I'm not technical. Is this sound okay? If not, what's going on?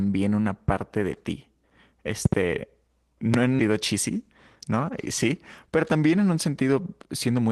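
No. There are loud pops at 0.68 to 0.71 s, just before "de ti", a double pop at 2.25 to 2.35 s, and another at 3.34 to 3.36 s. These are sudden electrical jolts, likely from a plug, switch, static or driver glitch.

At 3.59 s there is a skip ahead: the playback jumps forward, and roughly 0.7 s of speech is simply missing, with the two sides stitched together.

There is also a jitter buffer speed-up from 3.69 to 4.16 s at 107% speed and from 4.73 to 7.50 s at 108%. The speech sounds hurried, although the pitch stays the same. The call system was trimming tiny slices of audio to catch up after a backlog.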